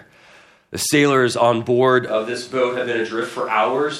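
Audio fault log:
2.08 s to the end, switch to a distant microphone: the speech suddenly turns roomy and hollow, loses its low end and drops by roughly 5 dB, while a faint bed of room noise, around 30 dB below the speech, becomes audible. The likely cause is that the close microphone's signal dropped out and the recording fell back to one placed further away. That microphone picks up more reflected sound and ambience relative to the direct voice, and sits too far from the mouth to get the proximity bass boost.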